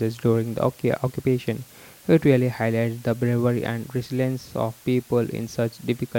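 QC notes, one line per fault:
Throughout: low bit depth with dither. A constant, even hiss sits roughly 25 dB below the speech with no distortion. The level fits samples rounded to about 8 bits, with added dither turning the rounding error into steady white noise.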